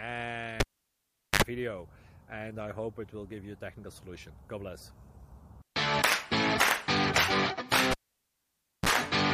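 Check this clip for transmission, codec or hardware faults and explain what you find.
Two hardware faults here, both a cable pulled and plugged in. At 0.60 to 1.42 s and 7.91 to 8.89 s you get a pop, roughly 0.77 s and 0.93 s of near silence, then a brief mains buzz (70 ms at 50 Hz, then 33 ms at 60 Hz) as the tip touches first, and a second pop when the sound returns.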